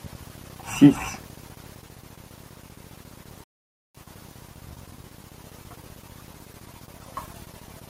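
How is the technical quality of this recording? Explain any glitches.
The speech has one glitch, a rebuffering stall from 3.44 to 3.95 s. Playback ran dry, froze into silence for 0.51 s, then resumed exactly where it stopped. Unlike a dropout, nothing is missing; time is only added.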